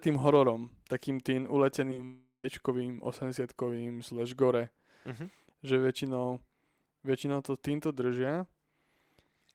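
It's a speech clip with a burst of network trouble right after "hororom takým tým". First comes short concealed packet loss: tiny gaps at 1.90 s, 1.94 to 1.97 s and again around 1.97 s. About 10 ms goes missing each time, and the decoder patches over it by extending the preceding sound, so you hear quick smears or wobbles. Then at 2.05 s there's a long network dropout running to 2.45 s, likely from the stream stalling. The receiver keeps the last sound going as a fading buzz or hiss for most of that stretch, then there's a last tenth of a second of silence before real audio resumes, minus the lost part.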